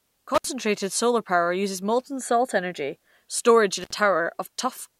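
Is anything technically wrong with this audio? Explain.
Yes, there's an intermittent contact twice: 0.35 to 0.45 s, just before "solar power uses molten", and 3.81 to 3.94 s, right after "molten salt energy storage". Each time a loose connection opens for about 65 ms, so the speech drops out with crackle at both edges.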